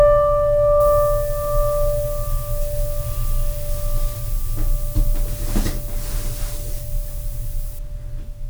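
This music clip turns thin, glassy and hard-edged from 0.80 s to 7.79 s, with highs and sharp transients pushed forward and the low end sounding recessed. That is pre-emphasis left on: the treble was lifted along the FM 75 µs curve, rising above roughly 2.1 kHz, and the matching de-emphasis was never applied afterward. The top end therefore stands about 13 dB hotter at 10 kHz than at 1 kHz.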